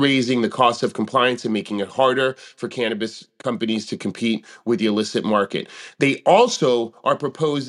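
Speech recording with no audible technical faults anywhere.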